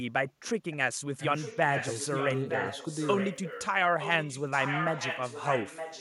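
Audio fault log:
0.71–0.76 s, 1.2–3.67 s and 4.0–6.0 s, echo leak: A delayed copy of the speech returns about 915 ms after the original. It is a faint scrap about 30 dB down at first, then about 10 dB below the speech through the middle stretch, and only about 5 dB below it from 4.0 s to the end. This is likely a loudspeaker-side echo canceller failing to strip out what its microphone picked up, so the residue is sent back.
0.74–1.22 s, speech suppressed in double talk: The speech level collapses by roughly 35 dB at its deepest, over about half a second, starting as the first echo scrap arrives. This is likely an echo canceller that hears two signals at once and cannot tell its own talker from loudspeaker echo. It clamps down on both, so the talker's speech dips instead of passing cleanly.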